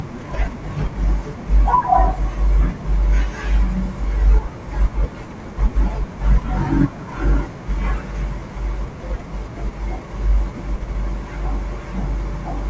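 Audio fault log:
Nothing stood out on listening to this speech recording.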